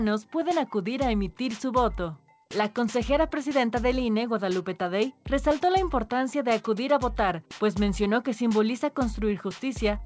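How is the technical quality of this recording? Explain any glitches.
No glitches: the audio has the 8 kHz band limit and usual coding texture expected of a wideband call path, likely G.722, and nothing else is audible.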